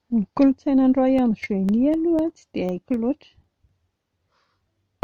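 Speech, with periodic USB or driver dropouts from 1.19 s to 4.44 s, starting just after "kolotsaina any". A short gap of roughly a millisecond, filled with silence, recurs every 0.25 s, about fifteen times in total. Each gap is heard as a small regular tick that sounds only while there is signal. The steady spacing points to a background task periodically stalling the USB bus or audio driver and briefly starving the stream.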